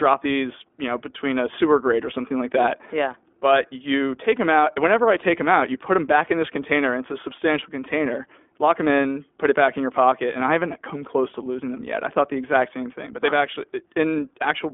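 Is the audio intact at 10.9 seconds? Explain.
No. At 10.9 seconds the speech sounds thin, boxy and slightly rough and synthetic, with nothing below 250 Hz or above 3.5 kHz, as it does throughout. This is the iLBC codec, which codes each 20 ms frame independently, plainly audibly, at a rate consistent with 15.2 kbps.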